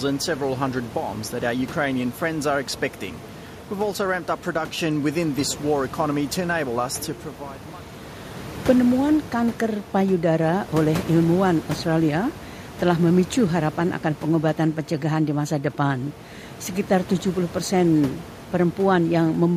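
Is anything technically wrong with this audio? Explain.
No, nothing in the signal chain misbehaves; the only thing beneath the speech is the room's own background noise, sitting about 18 dB down, which belongs to the recording space rather than the system.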